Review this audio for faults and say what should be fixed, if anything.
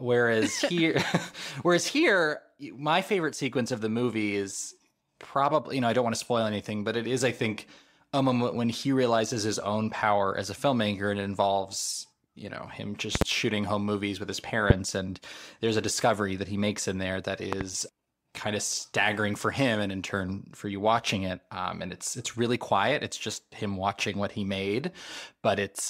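Loud pops occur three times: a double pop at 13.15 to 13.24 s, just before "shooting home movies with"; a single pop at 14.70 to 14.73 s, between "home movies with his" and "and there's a discovery"; and another double at 17.53 to 17.64 s, after "makes in there that". Each peaks roughly 20 to 25 dB above the speech, which continues underneath. A sudden voltage step, likely from a loose connector, switch contact or static discharge, is being shaped by the downstream circuitry into a sharp thump. Secure cables and connectors and ground the setup before recording.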